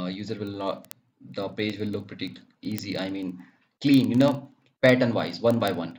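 A receiving device running on its own clock, not locked to the sender's digital link, drifts against it by roughly 700 parts per million, producing word clock ticks from 0.13 s to 5.98 s. Every time the two clocks slip past each other, a single sample is dropped or repeated and its neighbours are misread. That happens about every 30 ms, so the sound carries a steady train of roughly 150 ticks across the whole span.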